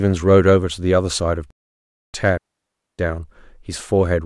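From 1.51 to 2.14 s the speech halts for 0.63 s, then resumes. This is likely a playback stall, with the player starved of data or blocked.

At 2.38 s a clean, noiseless hole of near silence lasts 0.61 s: a digital wireless dropout, where the receiver muted after losing too much data.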